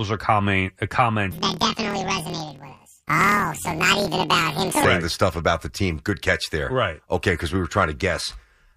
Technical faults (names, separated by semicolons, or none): planar audio read as interleaved